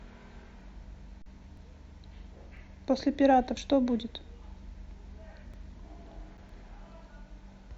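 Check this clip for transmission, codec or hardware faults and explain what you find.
Two kinds of fault are present in the speech: repeated skips from overlapping stream segments, and two brief underruns with a held sample.

Overlap between stream segments occurs at 0.61, 1.57, 2.57, 3.57, 5.54 and 6.49 s, each removing roughly 16 to 37 ms. The timestamps of adjacent segments overlapped, and the player trimmed that overlap from audio that was never actually duplicated, so the waveform jumps. Each event sounds like a small click or skip. The spacing of about one second points to segment boundaries of about 1 s.

Underrun with held sample occurs at 1.22 to 1.26 s (a 40 ms gap) and at 6.37 s (about 8 ms). The output buffer emptied and the converter held its last sample value until data resumed, so the signal goes flat and the sound simply stops. Live audio was lost during each gap, about 40 ms at the first and a few milliseconds at the second, so playback resumes with a discontinuity as each gap ends.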